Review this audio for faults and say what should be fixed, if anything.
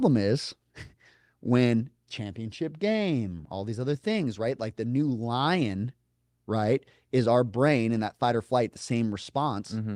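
Nothing here needs fixing; no faults are audible.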